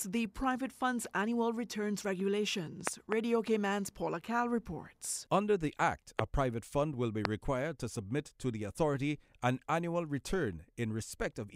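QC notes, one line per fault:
2.87–3.14 s, 6.19–6.21 s, 7.25–7.27 s, loud pop: a sudden voltage pulse, likely from a plug, switch or static discharge, enters the signal chain and is shaped by the circuits after it. The result is a sharp pop over the speech, which continues underneath. At 2.87–3.14 s it is a double pop about 20 dB above the speech. The other two are single pops about 25 dB above it, one just before "private fund will be" and one between "private fund will be" and "to submit to the".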